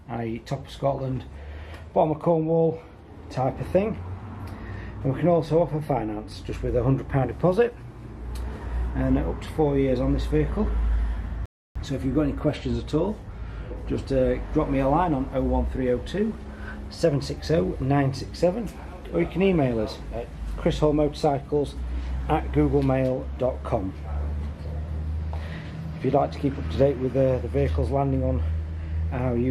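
The audio drops out cleanly from 11.46 to 11.79 s, a digital broadcast dropout where the receiver muted after losing the signal or getting frames that failed their checks. The gap of about 0.3 s fits a handful of bad frames, and whatever was sent then is gone.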